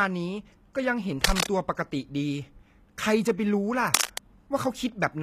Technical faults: HE-AAC compression; cable scratch noise

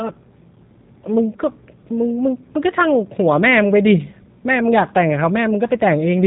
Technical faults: G.729 codec

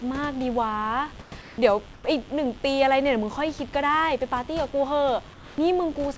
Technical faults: mains buzz; comfort noise in place of the background

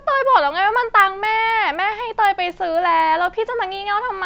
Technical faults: resampler restarted on every block

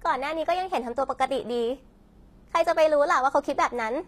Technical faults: HE-AAC compression

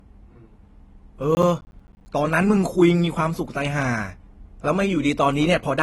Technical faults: AAC compression; processor overload crackle

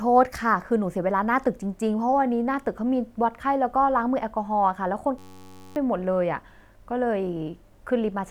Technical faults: system hang loop

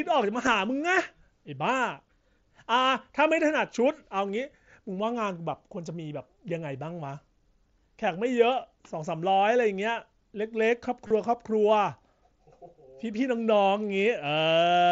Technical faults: concealed Bluetooth headset packet loss

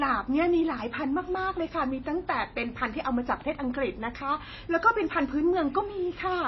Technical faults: MP3 compression

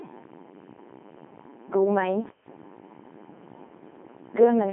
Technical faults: Codec 2 vocoder

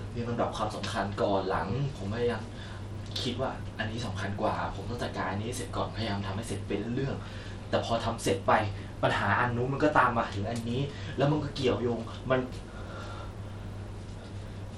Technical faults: Bluetooth SBC compression

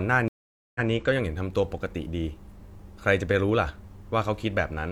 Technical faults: stream reconnect

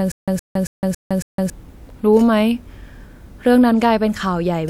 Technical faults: stutter with silent gaps

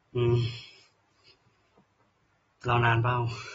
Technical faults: AAC compression

